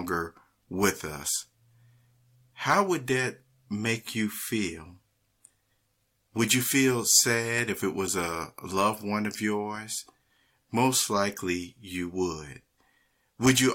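No technical faults can be heard anywhere in the recording.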